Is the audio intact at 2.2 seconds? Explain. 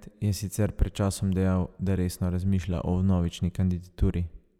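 Yes, the audio at 2.2 seconds is intact, with no dropout, click, distortion or other technical fault at that moment.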